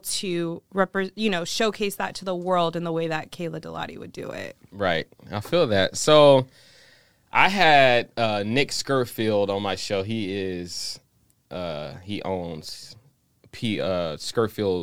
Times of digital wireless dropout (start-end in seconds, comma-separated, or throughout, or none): none